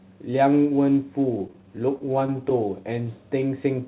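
Speech, heard through a narrowband call path with nothing above 4 kHz. Between 1.32 and 2.53 s, repeated stalls (stutter): brief late-packet waits, each under about 15 ms, are bridged by stretching the last sound, so the audio drags without the gaps of a dropout.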